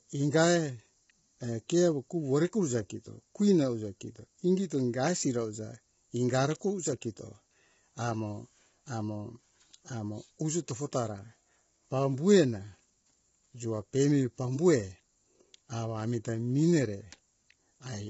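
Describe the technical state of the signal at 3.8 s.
At 3.8 s the speech carries low-delay AAC compression damage, present throughout the clip. It sounds rough and grainy. Noise fills the gaps between the pitch harmonics, and nothing remains above 7.7 kHz. The likely cause is AAC-ELD coding at a low rate, which fits about 16 kbps. Its short frames cannot separate closely spaced harmonics well. So the few available bits smear energy between them and strip the top band.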